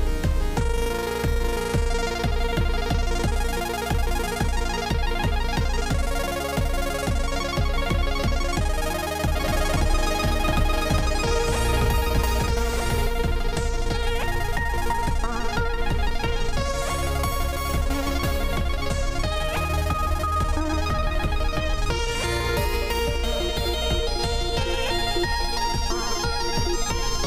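From 9.35 s to 13.07 s the audio is heard twice: a second, full-band copy about 5 dB quieter trails roughly one and a half seconds behind, dry and starting and stopping abruptly. This doubled audio track is likely a second capture through a slower path.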